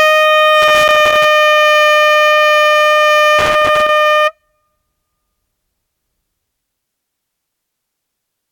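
From 0.62 to 1.25 s and again from 3.39 to 3.89 s, bursts of loose connector crackle break through. A worn contact intermittently makes and breaks, chopping the signal into irregular scratchy crackle. These clustered, uneven bursts set it apart from the steady, evenly spread ticks of vinyl surface noise.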